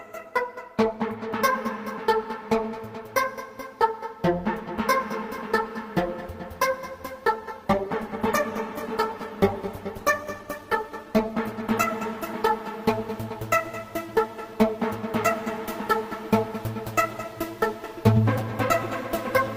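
At 7.33 s there's a call bitrate drop: the encoder gets squeezed, the sound goes rough and muffled as the top end disappears, and it sits at its worst for about 4 s. The quality fits roughly 48 kbps falling to 14 kbps, recovering by 13.45 s.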